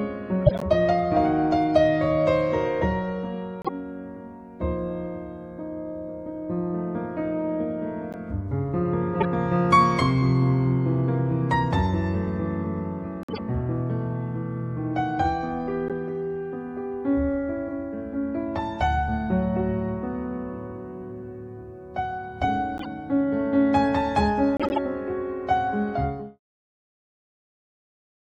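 Short chirps and noise bursts at 0.46, 3.62, 8.12, 9.20, 13.23, 15.88, 22.78 and 24.57 s are corrupt frames decoded. Damaged bits misplace energy in frequency. The longest, at 0.46 and 24.57 s, span several frames. The ending fades out smoothly near 26 s.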